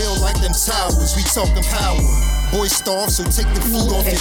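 At 2.22 s, computer activity noise begins and runs to the end at 4.20 s. It is a buzzing chirp, pulsing around a thousand times a second, roughly 20 dB under the sound. Processor or graphics load is disturbing the shared audio ground.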